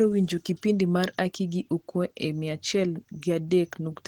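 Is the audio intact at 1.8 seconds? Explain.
No. At 1.8 seconds the speech carries Opus compression damage that runs through the whole clip. The sound is muffled and hoarse, likely from the encoder's hybrid speech mode at a rate that fits about 16 kbps, starving the bands of bits even though the bandwidth stays full.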